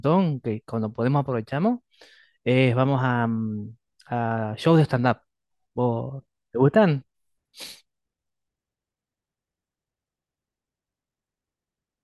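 Nothing in this recording calls for comment on the technical side, since no dropouts, glitches or other faults turn up anywhere along it.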